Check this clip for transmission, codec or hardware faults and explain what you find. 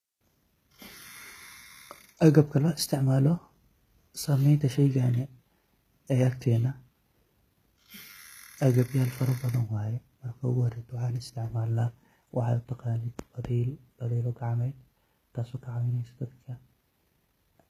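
One codec fault runs through the whole clip: HE-AAC compression is the likely cause. Only the lower spectrum was coded, with the treble rebuilt by spectral band replication from copied lower bands under a coarse envelope, at a low rate that fits around 20 kbps. Nothing survives above 14.9 kHz. The rebuilt treble's harmonics don't match the speech below the crossover, so s sounds come out gritty and lispy, and the damage is plainly audible.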